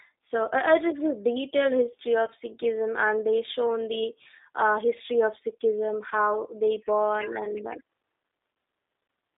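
Speech heard through the G.729 codec, which sounds slightly rough and synthetic throughout. Its character points to a low-rate CELP coder of the G.729A type at about 8 kbit/s. The signal is rebuilt from a vocal tract filter, a pitch predictor and a few pulses per 10 ms frame, not from the actual waveform, so fine detail is lost. The band is confined to roughly 300 Hz to 3.7 kHz, leaving it thin and without any top end. VoIP packet loss concealed by the speech codec occurs three times. The first is at 2.26–2.29 s, just after "is a detailed history". The second is at 6.09–6.13 s, just before "they born". The third is at 8.53 s. At each one the decoder fills the gap by extrapolating its last pitch and filter state with falling gain, which produces a brief smeared patch of buzzy tone or coloured noise. The first and third dropouts fit a single lost 10 ms frame, and the second fits two. Because each frame is predicted from the previous one, the audio stays weak or distorted for a short while after good packets resume.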